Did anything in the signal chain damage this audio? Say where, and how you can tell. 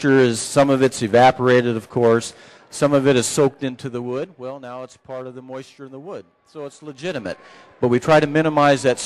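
Yes. A gain stage at the buffer level applied level changes in unsmoothed 2 dB steps, so each step clicks and zipper noise ticks over the sound: a fall of about 15 dB from 3.3 to 4.64 s at roughly seven steps a second, then a rise of about 15 dB from 6.88 to 7.44 s at roughly fifteen.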